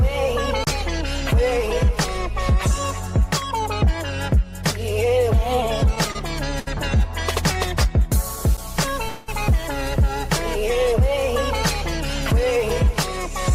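At 0.64 to 0.67 s a 30 ms block of digital silence cuts in: the sound drops out with no fade, leaving a blank vertical gap on the spectrogram. From 6.12 to 6.16 s and 6.60 to 6.68 s, short stalls from a late packet hold the sound for 30 and then 70 ms. Each appears as a smeared, horizontally stretched band with a slight buzz or dip. At 8.57 s a second 10 ms block of digital silence ticks. From 9.08 to 9.29 s a call audio freeze stretches the last sound into a fading buzz or hiss for about 0.2 s, most likely because packets were held up and the jitter buffer ran empty. It shows as a blurred, decaying band.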